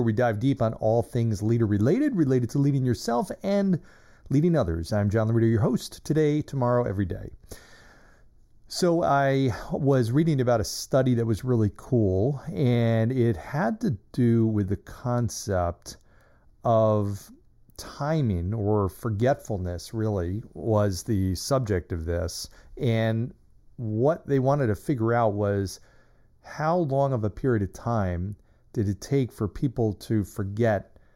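Channel delay (comb filtering) runs throughout: one channel lags roughly 0.2 ms, so the mono sum notches near 3 kHz, leaving the speech hollow and phasey.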